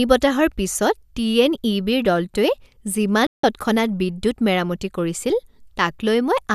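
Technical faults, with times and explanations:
3.27–3.44 s, digital broadcast dropout: the speech drops to silence for 168 ms, then resumes at "তৎক্ষণাৎ বিদ্যুৎ মেৰামতি". The receiver muted after losing the signal or rejecting corrupted frames, a gap consistent with seven lost frames, and that stretch of audio is gone.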